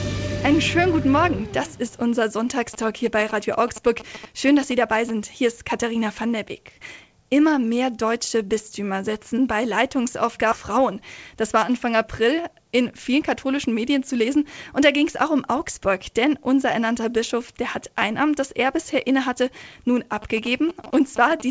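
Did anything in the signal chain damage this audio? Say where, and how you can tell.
Yes. The first problem is GSM signalling bursts, which come in at the analogue wiring stage. From 2.74 to 5.11 s, and again from 20.22 to 21.42 s, there's a galloping pattern of short buzzes at a repeat rate of about 217 Hz, sitting roughly 15 dB below the programme. A nearby 2G phone was exchanging signalling with its network, and the audio circuitry rectified the RF bursts into the analogue path.

There's a skip ahead at 10.52 s. Playback jumps forward with no gap, and both sides are butted together. Roughly a third of a second of audio is simply gone. This happened at the network or jitter buffer stage: a chunk was dropped, most likely when the buffer overflowed, while later packets were already queued. Dropping it cut the delay by about that same amount.

Right after the skip, from 11.35 to 13.46 s, the jitter buffer speed-up kicks in. 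The audio runs about 5% fast at unchanged pitch and sounds slightly hurried. The buffer was still holding more than its target, so the receiver kept trimming pitch-period-sized slices to drain it, removing around a tenth of a second in total. This all sits on a G.722 call path, which is why nothing reaches above 8 kHz.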